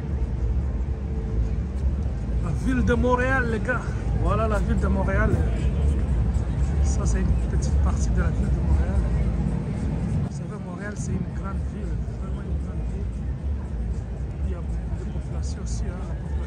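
A digital gain change most likely landed without a ramp at 10.28 s, the level stepping from one sample to the next, as a setting change or a one-bit shift would do. The result is a sudden gain jump: from that moment to the end of the audio, everything drops by about 6 dB at once, the background noise falling together with the sound, so the step is heard as an abrupt, unnatural loss of loudness rather than a fade.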